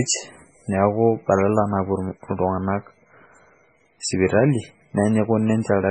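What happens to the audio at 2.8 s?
At 2.8 s you're hearing the same thing that runs through the whole speech clip: heavy MP3 compression artefacts, likely from a very low bitrate, something like 16 kbps. Nothing survives above 9.9 kHz, and weak frequency lines flicker in and out between frames, so it sounds watery and swirly, with smeared attacks.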